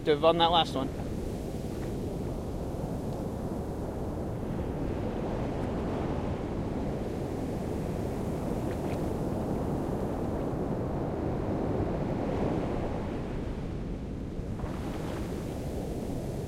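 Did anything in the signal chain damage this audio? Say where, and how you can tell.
Yes, there's a chunking fault at the buffer or processing stage: overlapping chunks. A 100 ms piece plays twice at 1.61, 3.71, 5.81, 7.91, 10.01, 12.11, 14.21 and 16.31 s, so you get a stutter or click on a steady 2.1 s beat. That spacing fits 2-second chunks where each new chunk starts 100 ms before the previous one finished, so the tail of one gets replayed at every join.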